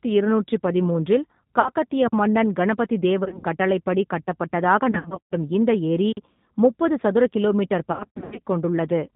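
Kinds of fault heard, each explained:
G.729 codec: The speech is rebuilt at 8 kbit/s from a vocal tract filter and pitch model, so it sounds plainly rough and synthetic. On a spectrogram everything stops at a hard ceiling of 4 kHz, with blurred, slightly buzzy harmonic structure below it.
VoIP packet loss concealed by the speech codec: Lost packets are replaced by the decoder stretching its last pitch and filter, giving buzzy tones or coloured noise that fade, around 1.6, 3.24 to 3.47, 4.91 to 5.34 (after "கட்டளைப்படி கட்டப்பட்டதாக") and 7.92 to 8.39 s. Spectrograms show smeared, repeated harmonic bands with decaying energy.
Gap between chunks: The audio arrives in pieces about 4 s long, with a 44 ms silence inserted at each join, at 2.08 and 6.12 s. The waveform drops abruptly to a flat line and resumes sharply, and the spectrogram shows a narrow, empty vertical stripe.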